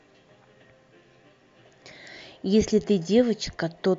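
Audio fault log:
No faults heard.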